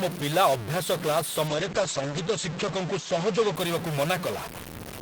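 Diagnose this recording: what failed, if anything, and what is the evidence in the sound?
A stuck bit runs through the whole recording, from start to end. The speech carries a constant distortion, and the gaps between phrases fill with noise instead of falling silent. The likely cause is a data line or converter output bit held permanently at 0 or 1. Every sample that should have the opposite value at that bit is pushed off by its fixed weight. Because this follows the waveform, and flips around zero for small values, the error becomes both distortion on the speech and noise in the pauses.

A call bitrate drop occurs between 1.48 and 3.61 s. It sits in the call-processing and codec path, driven by the network. The encoder's target fell from 32 to 10 kbps and stayed at its lowest for about 1.3 s. The audio turns rough and watery, and the top end is cut as the coded bandwidth narrows from 20 kHz to 8 kHz. 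This is the sound of a fallen bandwidth estimate forcing coarser Opus coding. It recovers once the rate climbs back.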